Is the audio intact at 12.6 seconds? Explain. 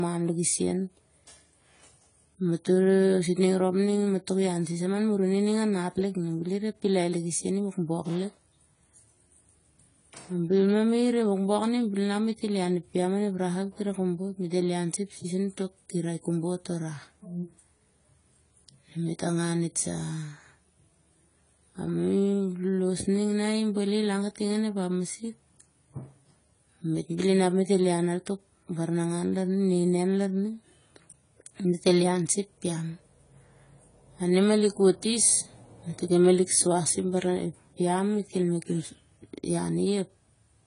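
No: at 12.6 s, as throughout the speech, AAC compression is likely at work: nothing above 10 kHz, with warbling, smeared sibilants, fitting about 24 kbps, unlike a clean low-pass.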